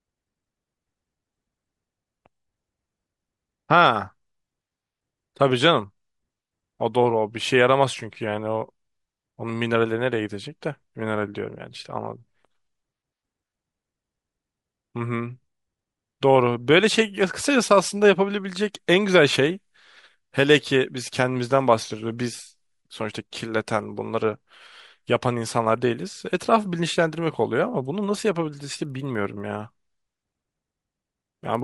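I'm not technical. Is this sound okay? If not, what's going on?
No. From about 28.7 s to the end, there's a steady tick, about 20 per second, under the speech: a resampler restarted on every block. The sound was converted in separate 50 ms pieces, likely from 24 kHz to 48 kHz, and each seam leaves a small click.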